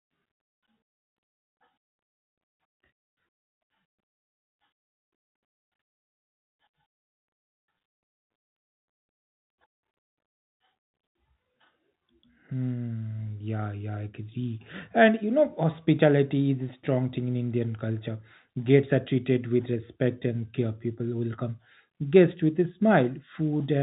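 No technical faults can be heard anywhere in this speech.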